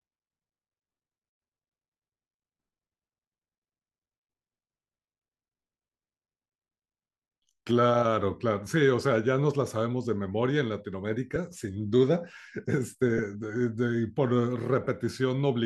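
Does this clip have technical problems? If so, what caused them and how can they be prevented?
Yes. Lost LE Audio frames cause brief noisy smears at 11.35 s (7.5 ms), 13.17 to 13.19 s (15 ms) and 14.84 to 14.87 s (22.5 ms). These fit one, two and three dropped 7.5 ms LC3 frames that the decoder filled by repeating the last spectrum with scrambled phase. Stronger Bluetooth links, less radio interference and more retransmission headroom prevent these dropouts.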